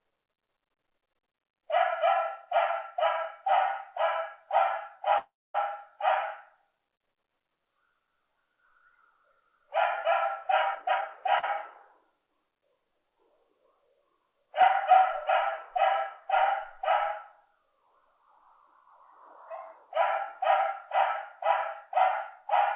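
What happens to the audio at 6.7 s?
Nothing goes wrong at 6.7 s: the audio runs on without a dropout, glitch or other fault there, carrying only the narrow telephone-style band of the call path, with nothing above 4 kHz.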